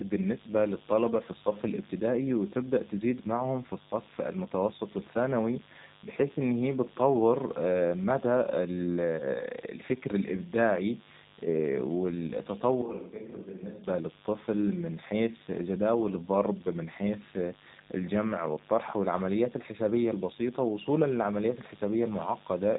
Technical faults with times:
0.00-22.78 mains buzz
0.00-22.78 G.729 codec

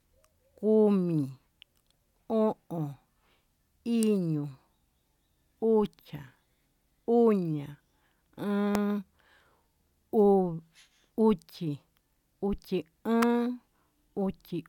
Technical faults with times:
4.03 electrical switching spike
8.75 electrical switching spike
13.22 electrical switching spike

